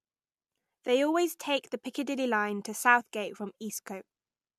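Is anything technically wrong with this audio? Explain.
No, the speech signal comes through intact, with nothing technically wrong to point to.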